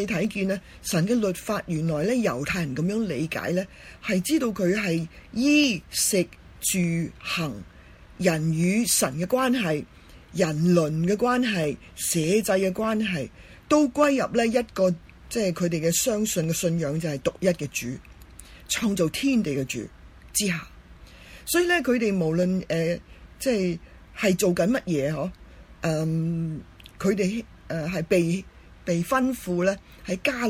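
Clock drift buffer slips run from 0.25 s to 30.23 s as a click every 0.6 s, around fifty in all. Two independent clocks likely disagree by a few hundred parts per million, so the buffer periodically drops or repeats a handful of samples.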